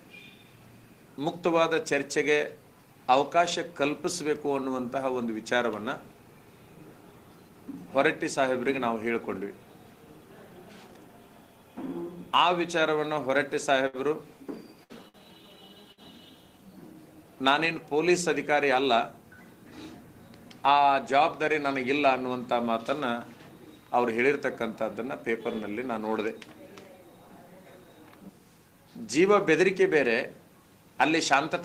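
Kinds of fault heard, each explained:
Short stall from a late packet: A packet arrived after its playout time, the jitter buffer ran dry, and the receiver held the last sound until the packet turned up, then resumed from the same point. It happens at 13.87 s and 15.08 s, each time stretching the sound by roughly 60 ms with a slight buzzy hold, while nothing is skipped. Each stall adds about 60 ms of delay to the playback that follows.
Burst of packet loss: Consecutive audio went missing or arrived too late to use, so the receiver extended the last sound, fading it, and then jumped ahead. At 14.83 to 15.04 s about 60 ms is concealed and 60 ms of content is lost. At 15.92 to 16.00 s about 50 ms of fill covers a 60 ms hole. Each appears as a brief held buzz or fading hiss, then a small forward skip.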